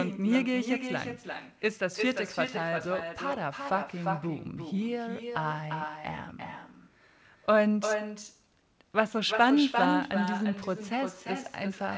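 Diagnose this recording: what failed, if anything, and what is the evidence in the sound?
The failure is in call processing at the far end: echo with no canceller. For the whole clip, every bit of speech comes back roughly 0.4 s later as a thinner copy sitting only about 7 dB under the original. That points to the other side playing the call on a loudspeaker, their mic picking it up, and no echo cancellation stripping it out before it returns across the network. The G.722 path tops out at 8 kHz, and the echo carries that same bandwidth.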